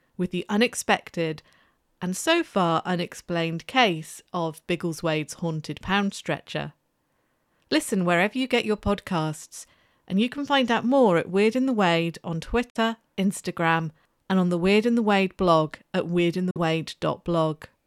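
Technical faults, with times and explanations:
12.70 s and 16.51 s, Bluetooth dropout: the speech cuts to silence for roughly 0.07 s each time, then comes back already further along, as if it kept playing during the gap. That's likely a wireless link missing its delivery deadline. The packets arrived too late, so the headphones had nothing to play, and what was lost fits about two codec frames' worth, around 46 ms of sound. Both gaps are the same size, which points to the same hiccup repeating.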